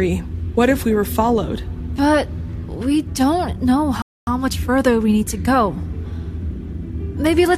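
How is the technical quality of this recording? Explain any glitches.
One clear glitch interrupts the recording, a playback stall partway through.

Rebuffering stall, 4.02 to 4.27 s: the player used up the audio it had downloaded and halted until more data came in. The sound drops abruptly into silence for about a quarter of a second, then picks up exactly where it broke off. No material is skipped or repeated; the pause simply inserts roughly 250 ms of dead air, stretching the clip by that amount.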